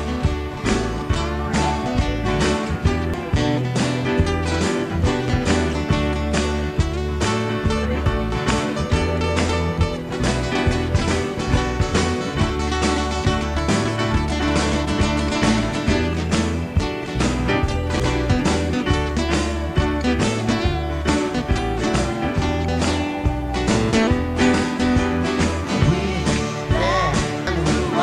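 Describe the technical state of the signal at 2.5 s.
At 2.5 s the signal is intact, with no audible fault at that point.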